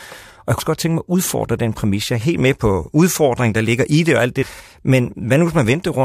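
Just after "i det og alt", from 4.42 to 4.44 s, there is damaged data in the compressed stream. Some bytes there are wrong. The decoder misreads the frames and loses sync. It hunts for the next frame header. The result is a brief glitch.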